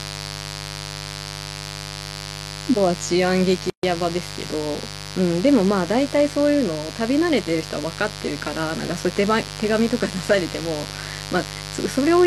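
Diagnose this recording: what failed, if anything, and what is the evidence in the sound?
Mains buzz enters in the analogue wiring: a dimmer, rectifier or poor shielding injects sharp spikes twice per 50 Hz cycle. The result is a steady raspy buzz under the speech for the whole clip, with harmonics stretching into the kilohertz range, strong at roughly ten decibels below the speech.

A gap at a join of encoded pieces comes from the codec and storage stage: separately encoded segments were joined without trimming the start delay and end padding. The speech drops into a 135 ms gap from 3.70 to 3.83 s, with smeared edges that leave a shorter silent part, then resumes where it stopped.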